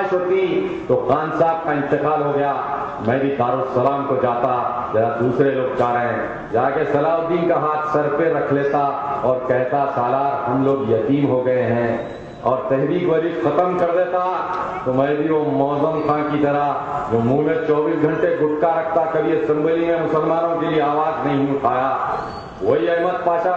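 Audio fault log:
No faults are found anywhere in the audio.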